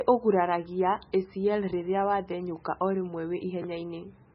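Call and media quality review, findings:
MP3 compression, throughout. Band hard-limited, nothing above 5.5 kHz, so sibilants dull and clipped. Watery, swirly texture on speech with smeared onsets. Weak spectral lines dropping in and out between frames. Degree of damage points to a very low bitrate, roughly 16 kbps. Component: likely the MP3 encoder starving for bits, cutting treble at a fixed frequency and zeroing low-energy lines.

Chunks out of order, 3.62–3.64 s. Brief garbled jolt near the end of the clip. Two 10 ms chunks swapped: one chunk delivered or written a single slot late and played after its successor. No audio lost, but three hard splice points produce the jumbled moment. Component: late arrival or write path reordering.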